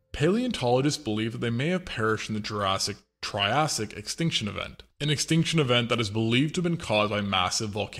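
Nothing stood out as a technical fault on listening to this audio.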